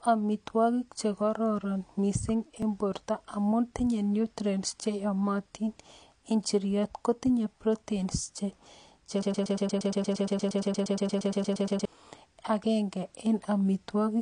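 Throughout the speech, the sound has likely been through lossy AAC compression. The encoder lowered the cut-off and coarsely quantised what remained, which fits AAC-LC at around 32 kbps. The result is plainly audible codec damage: dull, smeared speech with a fizzy, warbling edge on sibilants.

At 2.62 s, a dropped buffer (overrun) occurs: the software likely failed to collect its samples before the hardware overwrote them. Some 15 ms of audio vanishes, and the two sides are joined directly with no gap, so the sound jumps forward.

From 9.23 s to 11.85 s, a broken-record loop takes over: the playback or stream likely stalled and kept resending the last fragment it held. A slice of about 0.12 s repeats back to back, roughly two dozen times, and the speech that should have filled those 2.6 s is lost.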